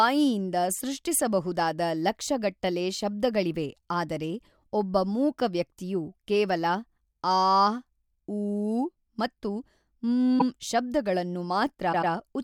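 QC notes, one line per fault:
10.38–10.43 s, repeated frames: a quick stutter as a 48 ms slice of speech plays twice. The same compressed frames were decoded again, adding 48 ms.
11.92–12.11 s, repeated frames: a longer stammer as a 96 ms block sounds three times. The duplicated compressed frames were decoded again, adding 192 ms.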